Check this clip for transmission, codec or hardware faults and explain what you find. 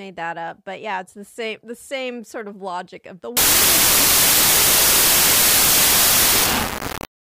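One fault is present. From 3.37 s to the end, just after "of logic of the", the sound turns into loud, harsh noise with the original only faintly audible beneath it, running at half speed with the pitch dropped accordingly. This is a wrong sample width: the pattern fits 32-bit samples being read as 16-bit. Each real sample is split into two values, and only the halves carrying the top bits still follow the signal.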